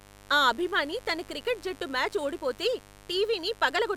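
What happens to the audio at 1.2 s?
At 1.2 s a steady, raspy buzz sits under the speech, roughly 25 dB below it. It isn't a local event: the same mains buzz runs through the whole clip. It comes from a 50 Hz supply leaking in through something like a dimmer, a rectifier or a missing shield. Sharp switching spikes twice per cycle put a dense row of 50 Hz harmonics up into the kilohertz range.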